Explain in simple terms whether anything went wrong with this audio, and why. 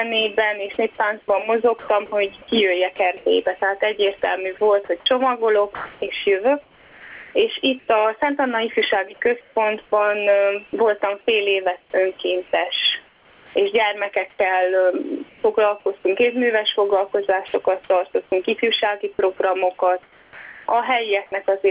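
Two things went wrong. The first is gain pumping, and it runs through the whole clip. The level is pulled down on every loud sound, so loud and soft parts end up closer together and the sound is squashed. This is a large, repeated swing. It is likely caused by the input level being set far too high, with a fast limiter pulling it down on every loud moment. A slow, steady fade would not do this. Here the rise and fall follow each loud sound.

The second is sound chopped by the voice detector, in three stretches: 1.26 to 7.88 s, 9.41 to 15.86 s and 17.48 to 20.66 s. Quiet bits and the edges of sounds are replaced by a soft, artificial hiss. This adds up to about 1.4 s, 1.2 s and 0.8 s in those stretches. The likely cause is the sender's voice detector repeatedly deciding nothing worth sending was there. Ordinary dropouts leave dead silence or clicks. These gaps are filled with the fake hiss instead.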